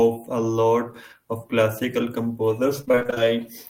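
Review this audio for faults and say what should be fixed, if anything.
From 2.81 s to 3.26 s the speech breaks into choppy fragments with pieces missing: repeated packet loss with robotic sound. Packets kept going missing or arriving late, and each hole was patched by extending the last received sound. About 200 ms went missing in short holes, the longest about 25 ms, and 168 ms was synthetic fill, so nearly half the stretch is concealment. Fix it with a larger adaptive jitter buffer and forward error correction on the link.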